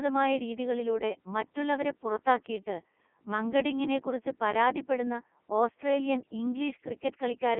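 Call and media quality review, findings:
Codec 2 vocoder, whole clip. Speech robotic and buzzy, resynthesised from sine waves; waveform not preserved. Heavy damage, sound pointing to the 3.2 kbit/s mode. Only pitch, voicing, energy and envelope survive. Line band 200 Hz to 3.4 kHz. Unlike plain narrowband filtering or a low-bitrate waveform codec's warble, the buzzy, synthetic texture sits on every voiced stretch, not just at the band edges.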